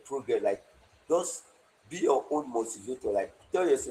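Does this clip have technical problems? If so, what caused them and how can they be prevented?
Yes. Throughout the speech the sound is hoarse, faintly robotic and grainy, with a thin, smeared top end. This is Opus voice compression at a low bitrate, which fits about 16 kbps. The linear-prediction layer codes the excitation coarsely, and the band above 8 kHz gets very few bits. Encoding at a higher bitrate, around 32 kbps or more, would prevent it.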